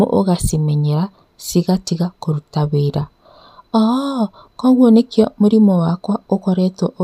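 No technical faults can be heard anywhere in the recording; the speech signal carries through without any interruption, distortion or other audible defect.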